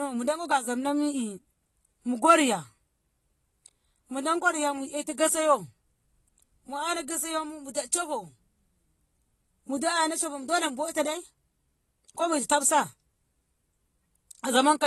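Throughout, the speech sounds dull and smeared, with a warbling, fizzy texture on sustained sounds and sibilants and nothing above 12 kHz. Likely AAC compression at a low bitrate, around 32 kbps, where the encoder drops the top band and quantises coarsely.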